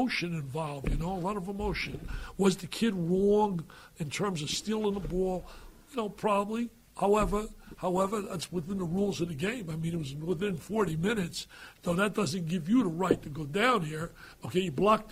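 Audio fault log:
7.96 to 11.96 s, adaptive stream at a lower bitrate: codec artefacts abruptly rise, as if the stream switched to a far lower bitrate. On a spectrogram the change is sudden, with no gap in the waveform.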